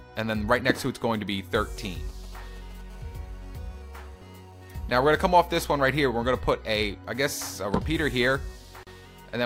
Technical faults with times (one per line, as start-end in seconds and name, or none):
1.77-2.81 GSM signalling bursts
2.90-5.89 GSM phone buzz
8.83-8.87 gap at a join of encoded pieces